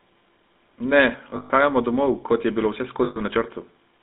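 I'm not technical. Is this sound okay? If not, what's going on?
No, not quite. The whole clip has gone through the GSM full-rate codec, the old mobile phone system. It squeezes the voice into a narrow phone band, roughly 200 Hz to 3.7 kHz, leaving a buzzy, gravelly roughness throughout that's plainly audible.

There are also two spots with lost GSM frames, at 1.3 to 1.51 s, just before "domov kot je bilo", and at 3.04 to 3.19 s, right after "domov kot je bilo". The phone patched the gaps by repeating the last good bit, so you hear a brief metallic ring instead of the real sound.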